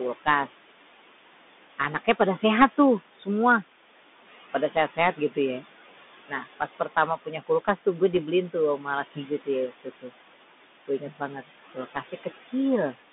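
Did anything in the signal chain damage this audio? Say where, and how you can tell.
Yes. The call-processing stage holds a noise suppressor, and its artifacts run through the whole clip. The room noise sits about 14 dB below the speech. The suppressor pulls it down by about 16 dB between phrases and lets it back up under the speech. That pumping is the giveaway.

The codec stage is a Bluetooth CVSD headset codec, and its damage is plainly audible. The band stops near 200 Hz at the bottom and 3.6 kHz at the top, so the sound is narrowband. A granular hiss lies under the speech. S sounds are scratchy. Loud bright moments distort where the adaptive step cannot keep up. One bit per sample, tracking only up or down, produces exactly this texture.

The same suppressor also causes speech cut by the noise suppressor. It mistakes quiet speech for noise six times: 1.78 to 2.43 s, 3.16 to 3.27 s, 4.7 to 5.37 s, 6.28 to 7.87 s, 8.53 to 10.12 s and 10.88 to 12.53 s. 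Inside each span, short pieces sink by about 10 to 17 dB. The deepest drops, about 17 dB, come in the fourth and fifth spans. The affected speech sounds swallowed or faint, and each cut lasts only a fraction of a second.

At 8.16 s there are bit errors on a Bluetooth voice link, so the fault lies in the wireless stage. The sound is a brief rushing crackle, not a hard click. CVSD gives every bit the same small weight, and the decoder's step recovers quickly, so a flipped bit smears rather than spikes. The error rate is low, about 0.7 percent.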